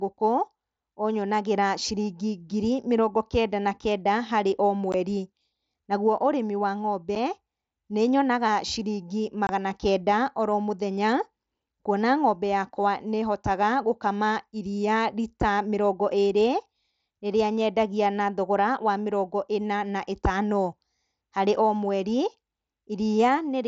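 Speech with unconcealed Bluetooth headset packet loss: brief silent holes with abrupt edges at 4.92 s (after "na kenda harĩ o"), 7.15 s, 9.47–9.49 s (after "nĩnyonaga ciringi") and 11.85 s (before "kuona ng'ombe"). The gaps last 7.5 to 22.5 ms, which fits one to three 7.5 ms mSBC frames dropped between headset and phone. Unlike concealed loss, nothing is smoothed or repeated over the gaps. The wideband mSBC link itself adds only light graininess.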